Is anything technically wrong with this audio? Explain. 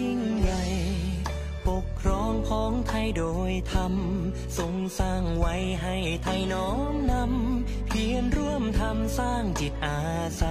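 No, nothing technically wrong stood out on listening to this audio.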